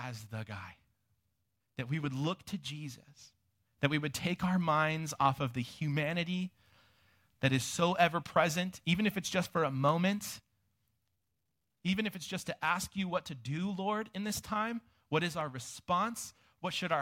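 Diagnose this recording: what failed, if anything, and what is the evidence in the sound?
Three sharp, isolated clicks in the speech, at 8.98 s, 9.89 s and 15.41 s, each a thin vertical line across the whole spectrum with nothing else disturbed around it. That's the signature of dropped samples: a sliver of the stream, around a tenth of a millisecond, goes missing and the waveform jumps straight to a later value. The driver or buffer stage is the likely culprit, occasionally losing a handful of samples during handoff.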